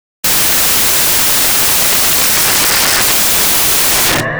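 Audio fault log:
Throughout: samples built from the wrong bytes. The reader assembles each sample from misaligned or swapped bytes, promoting the rapidly changing low bits to the top, so the sound becomes loud, harsh broadband noise.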